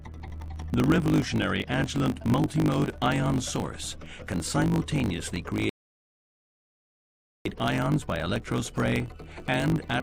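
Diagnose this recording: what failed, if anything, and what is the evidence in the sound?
Buffer stage, block size mismatch (truncated): block tails are dropped, so a 50 Hz buzz shows as vertical spectrogram stripes, and audio runs 1.07 times fast.

Playback stage, rebuffering stall: the waveform goes flat from 5.69 to 7.45 s, then resumes exactly where it stopped, adding about 1.88 s without losing material.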